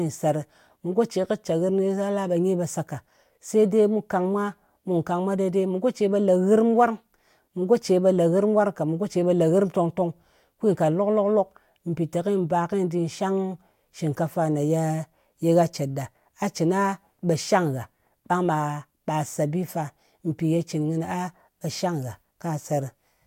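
Listening through this speech recording, nothing stood out as a technical problem at any point.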